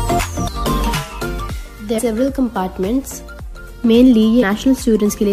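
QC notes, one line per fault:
0.47 to 0.49 s, compressed frames skipped: the sound jumps ahead by around 0.4 s, which fits about fifteen missing 23.2 ms frames, so the join is a soft smeared blip, not a click.
1.98 s, compressed frames skipped: same thing, with roughly 0.3 s gone and the same blurred seam.
4.41 s, compressed frames skipped: another jump of about 0.3 s, more like ten frames, with the same smudged blip at the join.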